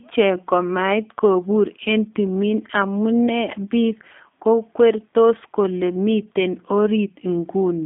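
Throughout, the speech carries G.729 codec damage. Nothing passes above 3.7 kHz. Each frame is rebuilt from a few pulses, giving a rough, synthetic tone that fits 8 kbit/s.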